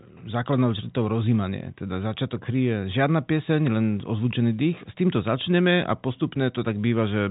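No technical faults are audible.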